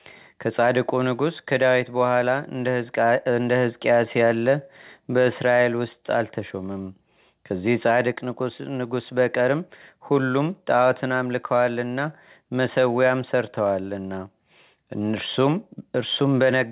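No technical faults can be heard anywhere in the recording. The speech comes through a call path with nothing above 4 kHz, the narrowband telephone sound that fits G.711 mu-law coding.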